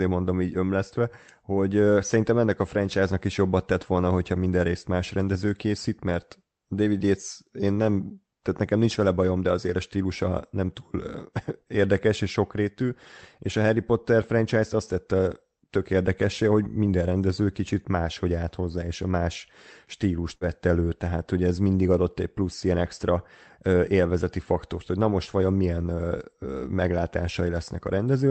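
At 20.35 to 20.44 s, just before "elő tehát hogy ez", a burst of packet loss is heard. Unlike a clean dropout, the gap isn't silent. About 55 ms is bridged by a fading continuation of the preceding sound, and about 60 ms of speech is skipped entirely.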